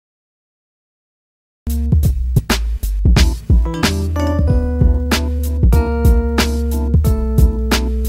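Digital silence runs from the top until 1.67 s. Then the audio cuts in mid-sound. This is a cut-off start: capture began late, after the sound was already underway. There is no natural attack and no fade-in, just an abrupt entry.

At 2.38 s there is a skip ahead. Roughly a fifth of a second of audio is missing. Nothing fills the gap. The two sides of the cut are butted together, so playback lurches forward and the latency drops by about that much.

From 4.39 s to 5.77 s comes a jitter buffer speed-up. The receiver trimmed tiny pitch-period slices to drain excess buffered audio, about a tenth of a second in all. Pitch holds steady, but the passage plays at 108% and sounds rushed.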